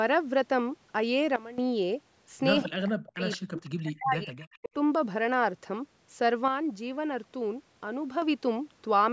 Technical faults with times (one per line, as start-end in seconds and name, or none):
1.36-1.58 sudden gain jump
2.64-4.73 speech suppressed in double talk
3.29-3.37 echo leak
3.64-3.70 echo leak
4.40-4.65 echo leak
6.48-8.22 sudden gain jump